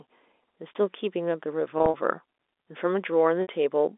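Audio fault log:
1.78–1.94 s, packet loss with pitch repetition: about 100 ms of audio drops out in short runs scattered over 160 ms, the longest 40 ms, which fits roughly five 20 ms packets. The receiver bridges each gap by repeating the last pitch period, giving a brief held, buzzy quality.
3.42–3.48 s, packet loss with pitch repetition: a 60 ms gap is filled the same way, with the repeated period fading out before the audio resumes through the narrow telephone band.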